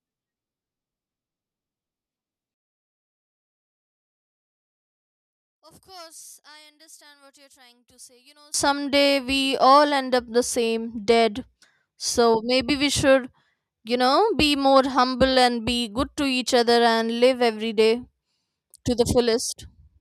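From 2.54 to 8.54 s, one channel was likely inverted, so the shared speech cancels in mono, dropping about 30 dB to a faint remnant.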